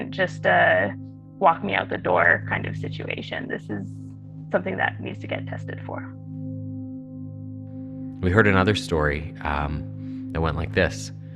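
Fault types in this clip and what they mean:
call bitrate drop: from 1.68 to 5.77 s the encoder falls from 48 to 15 kbps, bottoming out for about 2.8 s, so the sound turns coarse and muffled before recovering.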